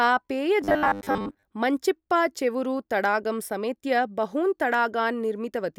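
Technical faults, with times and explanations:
0.61–1.43 s, robotic sound from repeated short buffers: the speech turns into a rigid, metallic buzz pitched at 100 Hz that only loosely tracks the syllables, ending just before "मञ्चिप्पाचेरुवु तडागं समेत्य बहून्". The likely cause is audio arriving too slowly, so playback keeps looping the most recent fragment, which fits a 10 ms buffer. Roughly two thirds or more of the stretch is repeated material, and the real audio it replaces is lost.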